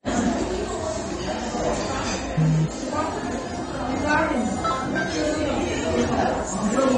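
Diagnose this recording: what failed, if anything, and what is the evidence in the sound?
Codec stage: throughout, nothing above 9.7 kHz, with plainly dull, smeared sound; likely AAC compression discarding bands at a low bitrate, consistent with 32 kbps AAC-LC.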